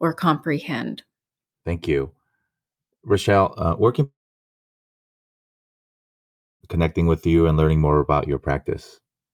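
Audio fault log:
4.03–6.63 s, long network dropout: right after "uh where can" the speech breaks into a short fading buzz, then about 2.5 s of silence before "connecting with you and" resumes, with the lost stretch simply gone. Likely a long gap in arriving packets.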